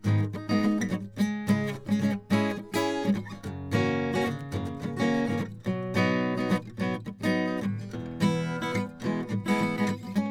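No technical faults can be heard in this music.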